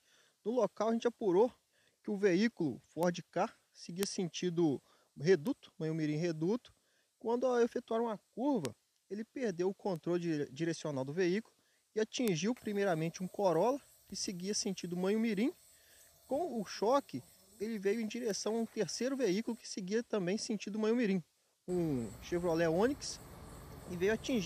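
Seven bit error spikes occur at 3.03, 4.03, 5.47, 8.65, 9.96, 12.28 and 18.31 s. Each is a flipped bit that briefly throws the sample value off by a power of two, heard as a single broadband tick, reaching between about -28 and -10 dBFS.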